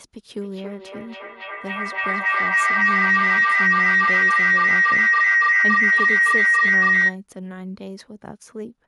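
Feedback howl runs from 0.36 to 7.22 s in this speech clip: sound leaks from a loudspeaker back into a microphone on the same call, gaining level each trip, so it narrows into a howl near 2 kHz, pulsing roughly every 300 ms and peaking about 13 dB above the speech.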